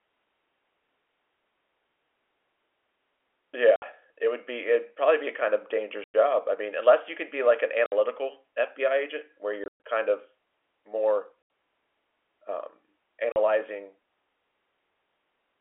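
Packet loss filled with silence at 3.76–3.82 s (60 ms), 6.04–6.14 s (100 ms), 7.86–7.92 s (60 ms), 9.64–9.80 s (160 ms, scattered, longest run 120 ms), 11.42–11.50 s (80 ms) and 13.32–13.36 s (40 ms). The receiver inserted silence for lost audio, cutting hard-edged holes in the narrowband G.711 telephone speech. Every gap is a multiple of 20 ms, which fits 20 ms packets.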